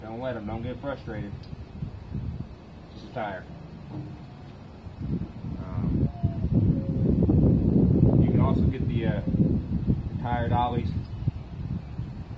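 No technical faults can be heard anywhere in the audio.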